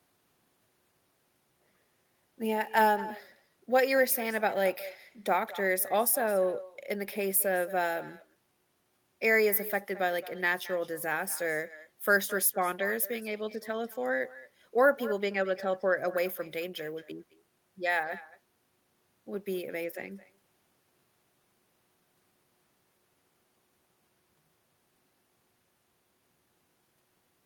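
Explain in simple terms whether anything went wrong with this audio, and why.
Something went wrong for the whole clip: echo with no canceller. The other end played the speech through a loudspeaker, and its microphone caught it again. Nothing removed that copy. So every phrase returns about a fifth of a second later, quieter and thinner.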